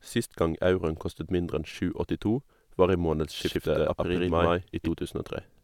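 At 3.39 s a doubled audio track appears in the speech and lasts until 4.91 s. A second full-band copy runs about a tenth of a second behind the first, at roughly the same level. It has no decay and no room colour. It snaps in and cuts out abruptly. Every syllable sounds twice, like a hard slapback. The likely cause is a slower capture path picking up the same signal and mixing it back in late.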